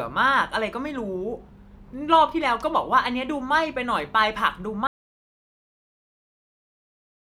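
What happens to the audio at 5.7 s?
At 5.7 s the clip is inside an audio dropout to silence that begins at 4.87 s and runs to the end of the recording. The speech stops abruptly mid-flow and is replaced by silence, with no room tone left. The likely cause is a lost input, such as a disconnected device, failed link or accidental mute, while recording continued writing silence. Whatever was spoken during that stretch is unrecoverable.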